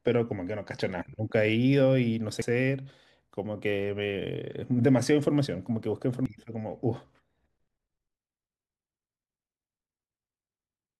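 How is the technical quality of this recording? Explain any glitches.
The speech has two very short glitches, at 2.42 s and 6.26 s, both from damaged data in a compressed stream. Corrupted bytes make the decoder misread a frame and hunt for sync, leaving a brief glitch.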